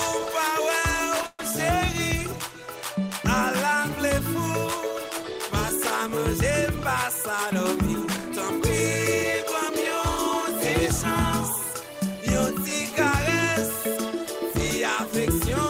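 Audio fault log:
1.26–1.40 s call audio freeze: 125 ms of buzzy or hissy, fading fill ending in 20 ms of silence, seen as smeared, decaying bands then blank; likely delayed packets, nothing lost.
11.73–12.23 s jitter buffer speed-up: audio runs at 108% speed at unchanged pitch, sounding hurried; about 50 ms of pitch periods are trimmed, so the waveform shows whole cycles dropped while the remaining cycles keep their length.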